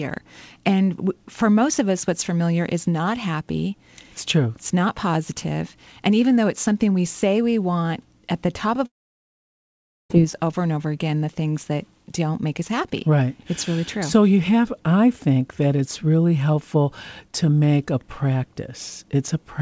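Between 8.86 and 10.12 s, just after "want at the top", the sound breaks off. The last fragment is stretched into a short fading buzz, then about 1.2 s of near silence follows before the audio resumes at "over and over again", with roughly 1.24 s of material gone. This is the signature of a long network dropout: packets likely stopped arriving, and the receiver's concealment ran out. The G.722 call path keeps everything below 8 kHz.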